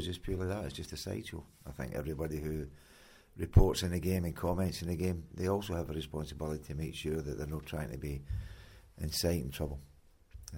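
No faults heard anywhere in the clip; nothing to flag.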